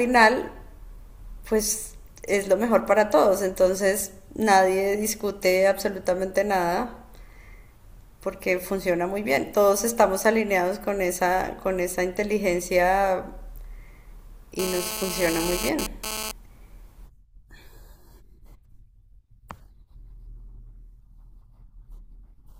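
A speech recording carries a GSM phone buzz from 14.59 s to 16.31 s: a hard, raspy tone at about 217 Hz, thick with harmonics, sitting only about 7 dB below the speech and bearing no relation to it. A nearby 2G handset transmitting in a data burst pulses its radio 217 times a second, and the audio circuitry rectifies those pulses into the audible buzz heard over this stretch.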